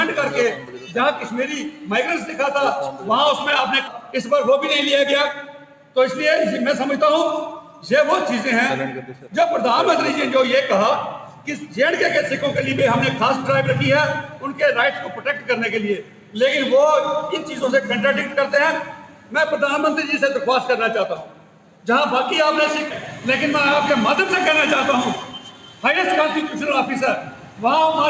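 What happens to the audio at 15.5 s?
At 15.5 s the sound sits inside a dip caused by the noise suppressor, running from 14.23 to 16.37 s. The suppressor mistakes the sound for noise and pulls it down by up to about 11 dB. Sustained parts and decays sink most. Sudden onsets still come through.

This dip is part of a wider problem: a noise suppressor meant for speech is being applied to music or other sounds throughout the clip. Around this moment it keeps turning steady content down and back up, swinging by roughly 10 dB. The level pumps and the tails thin out.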